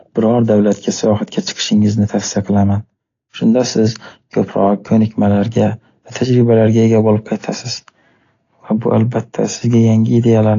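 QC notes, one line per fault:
Throughout, AAC compression: speech sounds dull and warbly, with nothing above 7.1 kHz and audible smearing, likely from low-bitrate AAC-LC around 32 kbps.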